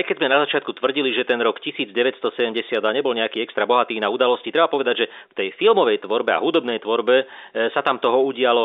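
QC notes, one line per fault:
No faults to note.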